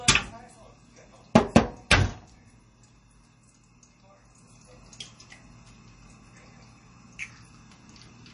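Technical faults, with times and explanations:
Throughout, MP3 compression. Nothing is heard above 10.6 kHz, so the top end sounds dull and closed in. The coding damage is plainly audible, with a watery, swirling texture. The likely cause is MP3 encoding at a low bitrate, which fits something near 32 kbps. Short of bits, the encoder drops the treble above a fixed cutoff. It also discards weak frequency components, which flicker in and out between frames.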